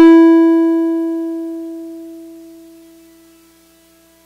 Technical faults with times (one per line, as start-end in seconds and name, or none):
0.00-0.18 hard clipping